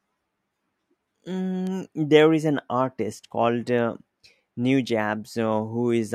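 Speech with word clock ticks running from 0.61 s to 5.9 s: about ten short clicks at a steady rate of roughly one every half second. The pattern points to a digital link read by a receiver on its own free-running clock, not locked to the sender. The two clocks differ by a few tens of parts per million, so they periodically slip past each other, and at each slip a sample is dropped or repeated, producing a tick.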